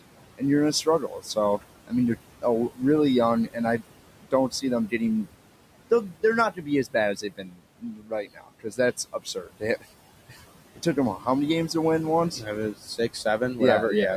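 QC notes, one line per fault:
throughout: noise suppressor artifacts. Background noise sinks in the pauses and swells back under the voice. The suppressor pulls down about 18 dB in bands it judges steady noise, with room noise about 15 dB below speech.
0.34–2.82 s, 3.46–5.27 s, 6.09–11.26 s (ending before "many games to win"), 12.39–13.59 s (after "games to win once"): speech cut by the noise suppressor. Parts of the speech sound swallowed or faint, dipping about 18, 17, 19 and 8 dB, totalling roughly 0.4, 0.3, 1.5 and 0.2 s, because the suppressor mistook quiet speech for noise.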